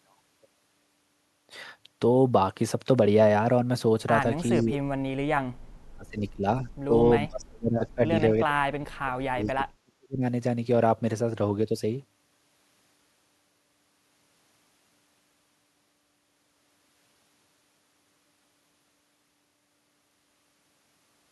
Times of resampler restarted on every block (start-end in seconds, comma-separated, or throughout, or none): none